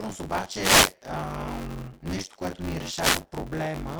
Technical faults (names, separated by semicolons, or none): buffer tearing; wireless microphone noise hit